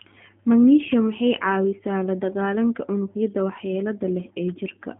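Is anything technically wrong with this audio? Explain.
Yes. G.729 codec damage runs throughout. The speech is rebuilt from a vocal tract model, a pitch predictor and sparse pulses, which fits an 8 kbit/s VoIP stream. With nothing above 3.5 kHz, it sounds narrow, rough and plainly synthetic.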